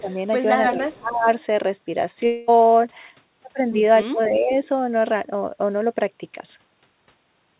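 This speech clip carries three episodes that point to speech suppressed in double talk, where the echo canceller likely could not tell the near talker from loudspeaker echo while both sides spoke and so turned everything down. The voice dips by about 15 dB from 0.01 to 0.1 s, by about 20 dB across roughly half a second between 0.65 and 1.29 s, and most deeply, by about 25 dB, from 4.04 to 4.52 s. Separately, from 2.26 to 2.50 s there is what sounds like a long network dropout: about 220 ms of audio likely never arrived, and the receiver filled nearly all of it by stretching the last sound into a fading tail rather than leaving silence. The speech then resumes further on with that stretch missing. Throughout, the G.711 mu-law call path at 64 kbps leaves nothing above 4 kHz, giving the familiar narrowband telephone sound.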